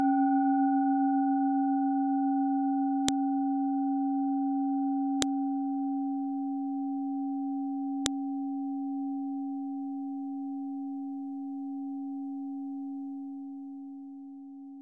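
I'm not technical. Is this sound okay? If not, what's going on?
No. You'll hear three sharp, loud clicks or snaps, at about 3.08, 5.22 and 8.06 seconds, each over in an instant and unrelated to what the sound is doing at that moment. This is a file header played as audio. The recording was assembled from separate pieces, and each piece began with a small block of technical data describing the file. That data wasn't stripped out when the pieces were joined, so the player treated it as sound, producing a snap at each join.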